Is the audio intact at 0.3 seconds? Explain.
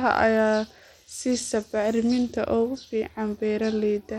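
No. At 0.3 seconds the speech carries Bluetooth SBC compression, present throughout. Nothing sounds above 16.7 kHz, and plainly audible grit and flickering treble ride on it. This is likely a small bit pool, fitting roughly 96 kbps, starving and coarsely quantising SBC's upper sub-bands.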